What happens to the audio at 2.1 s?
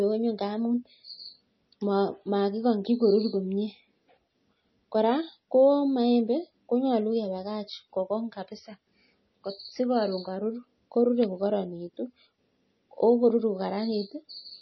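At 2.1 s, as throughout, the speech sounds watery and swirly, with nothing above 5.9 kHz, likely from heavy MP3 compression at a low bitrate. Unlike a plain low-pass filter, starved MP3 frames also make faint components flicker on and off.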